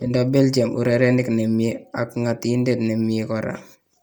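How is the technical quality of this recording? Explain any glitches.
The recording is marred by one fault that runs throughout.

From start to finish, the speech carries a heavy breathy, grainy edge. The cause is likely Bluetooth LC3 compression. It codes sound in 10 ms frames. At a low bitrate, which this fits, it discards upper detail and fills it with noise. Content still reaches 20.2 kHz.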